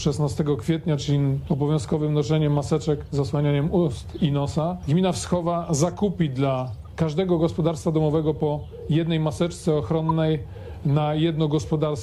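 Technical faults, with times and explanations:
3.04 to 10.12 s, corrupt frame decoded: three short blips, at 3.04 to 3.09 s, at 6.85 s, and at 10.09 to 10.12 s. Each time, flipped bits in a compressed frame were decoded anyway, so misread gains or codes put energy at the wrong frequencies for roughly the span of the damaged frames. The first is faint, around -55 dBFS. The second is louder, near -40 dBFS. The last is a sharp burst, peaking at about -15 dBFS.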